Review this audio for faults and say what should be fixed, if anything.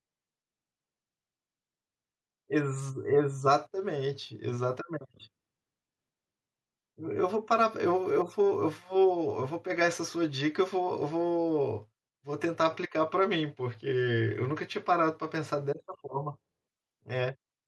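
Nothing needs fixing: no technical fault can be heard anywhere in the speech recording.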